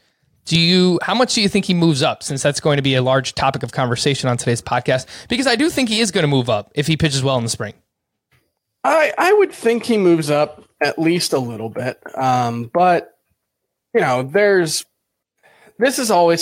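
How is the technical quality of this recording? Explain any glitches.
The recording has one glitch. From 14.8 to 14.85 s, damaged data in the compressed stream makes the decoder lose sync and search for the next frame, producing a brief glitch such as a chirp, squawk, click or short hole.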